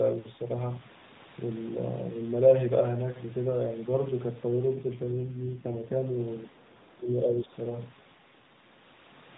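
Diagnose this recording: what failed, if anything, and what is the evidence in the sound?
AMR rate drop, at the codec stage under network control: from 4.76 to 5.94 s the speech turns rougher and more synthetic with no gap and no change in bandwidth, which fits a mode switch from 12.2 kbps down to 5.9 kbps, with bits diverted to error protection.

Speech suppressed in double talk, in call processing: between 6.66 and 7.53 s the talker's level dips, about 20 dB at its deepest and roughly 0.7 s in total. The likely cause is the echo canceller attenuating the near-end talker while the far end was also talking.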